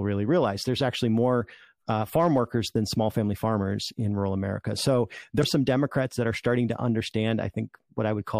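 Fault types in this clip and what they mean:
Damaged data in a compressed stream: corrupted encoded data made the decoder misread frames and lose sync until the next valid header, causing a brief glitch from 5.40 to 5.44 s. A spectrogram shows a narrow vertical smear breaking the speech harmonics. The waveform shows an abrupt discontinuity.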